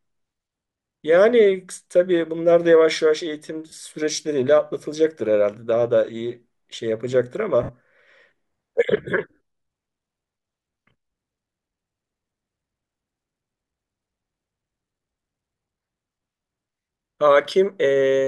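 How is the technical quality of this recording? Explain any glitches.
The recording has two brief dropouts where the speech turns into a hissy, smeared patch. The first runs from 3.69 to 3.72 s (30 ms) and the second from 7.63 to 7.71 s (60 ms). These are lost LE Audio frames. When Bluetooth LE Audio packets fail to arrive, the LC3 decoder fills the gap by repeating the last spectrum with randomised signs, fading it as the gap continues. The lengths fit three and six 10 ms frames. The light lossy compression underneath is barely audible.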